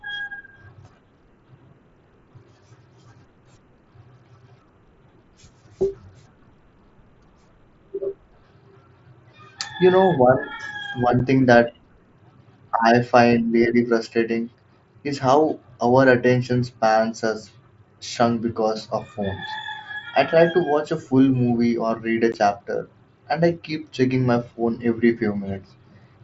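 At 11.19 s, just before "thing that", and again at 22.32 s, between "or read a" and "chapter and I keep", the speech drops out in unconcealed Bluetooth headset packet loss. Voice data from the headset went missing and nothing patched the gaps: about 7.5 ms (one frame's worth) and 15 ms (two frames). Each sounds like a tiny hole in the speech with abrupt edges. A waveform shows a flat gap with sheer edges, and a spectrogram shows a thin blank vertical slit through the mSBC band, which reaches 8 kHz.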